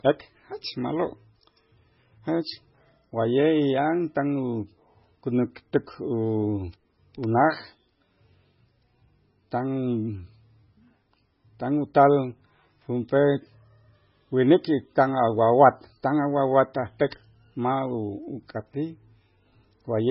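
Speech runs through the whole clip with heavy MP3 compression artefacts, likely from encoding at a very low bitrate, around 16 kbps judging by the damage. Nothing is left above about 5.6 kHz, where the encoder has cut the treble. Below that, weak frequency lines drop in and out from frame to frame, giving a watery, swirly texture and chirpy sibilants. That swirl is what separates it from a simple low-pass filter, which would dull the top but leave the rest stable.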